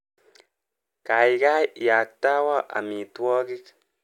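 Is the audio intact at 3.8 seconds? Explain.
Yes, at 3.8 seconds the speech plays through intact, with no dropout, click, distortion or other fault audible at that moment.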